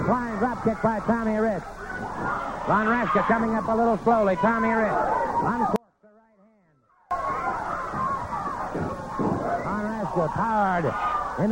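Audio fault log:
5.76–7.11 s, audio dropout to a faint residue: the sound cuts out abruptly for about 1.35 s, leaving just a faint leak roughly 35 dB down, then snaps back. Likely the feed dropped while the chain after it stayed live, hence the abrupt edges, unlike a fade.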